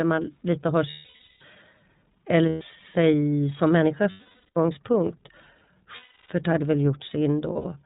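The iLBC codec is audible throughout this speech clip: it is band-limited below 4 kHz with a rough, synthetic edge, consistent with 30 ms frames at 13.33 kbps. Lost iLBC frames cause breathy, buzzy held vowels, as the decoder repeats the last pitch cycle. This happens at 0.90–1.42 s after "man lite har", at 2.49–2.62 s before "sig som människa", at 4.11–4.57 s after "eller sig som människa", at 5.96–6.30 s, and at 7.53–7.66 s, where the losses are scattered and the longest run is roughly 70 ms. Each time, the speech recovers almost immediately.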